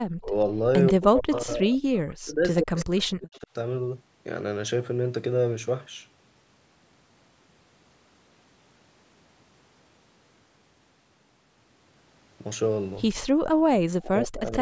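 From 0.14 to 3.49 s the speech keeps ducking, dropping by up to around 40 dB for about two seconds in total. That's speech suppressed in double talk, likely the echo canceller clamping down while both ends talked at once. Within that stretch there's echo leak at 0.86–1.41 s and again at 2.56–3.39 s: a copy of the voice trailing 135 ms behind, roughly 25 dB down the first time and louder, roughly 15 dB down, the second. It's likely a far-end speakerphone whose canceller didn't fully remove what its mic picked up. At 13.31–13.42 s the background is gated by the echo canceller, with the room tone dropping about 40 dB for around a tenth of a second while the loudspeaker played, then returning. More double-talk suppression follows at 13.7–14.43 s, with the speech turned down for about half a second. A faint echo leak closes things at 14.46–14.57 s, again 135 ms late and roughly 30 dB below the speech.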